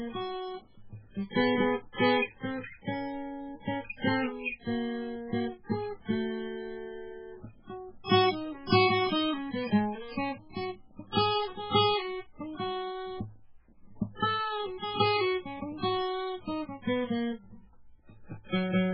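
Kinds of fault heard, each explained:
MP3 compression, throughout: the music has nothing above 5.3 kHz, and heavy encoding damage runs the whole length, likely from MP3 starved of bits, which fits a very low bitrate. The encoder drops the treble and switches weak frequency lines on and off, leaving a watery, swirly texture.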